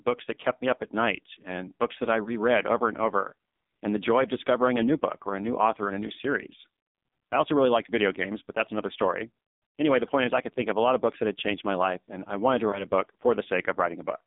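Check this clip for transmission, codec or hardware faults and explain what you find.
Yes, there are two problems, both from a mobile call path.

Throughout the clip there's AMR narrowband mobile codec damage, and it's heavy. The band runs only from about 200 Hz to 3.7 kHz, so the speech sounds thin and boxy. The codec rebuilds the voice from a vocal-tract model fed by sparse pulses, and at this low a rate it comes out buzzy and synthetic. That quality fits one of AMR-NB's low modes, around 5.9 kbps.

There are also three lost AMR speech frames, each sounding like a single 20 ms frame dropped on the radio link. The first is at 2.24 to 2.35 s, between "and books that I" and "over and over and". The second is at 4.98 to 5.02 s, between "of discovering a new" and "or a new author". The third is at 12.70 to 12.86 s, just after "and I wanted to". Each time the decoder filled the gap by reusing the last good pitch and filter settings at lower gain. 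You hear a short dip or warble, and the voice comes back a bit rough for a moment.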